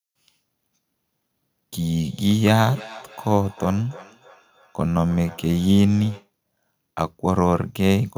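Speech carries a feedback echo between two devices from 2.03 to 6.3 s: a second device replays the audio into an open microphone, so it returns about every third of a second, peaking about 21 dB below the voice. Spectrograms show faint, evenly spaced copies; waveforms show small trailing bursts.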